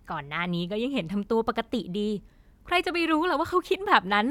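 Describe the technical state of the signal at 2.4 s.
At 2.4 s the speech signal is intact, with no dropout, clipping, glitch or other fault.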